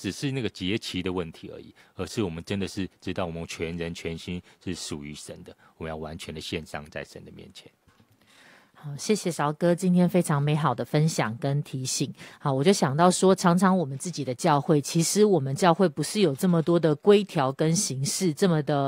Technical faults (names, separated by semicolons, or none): none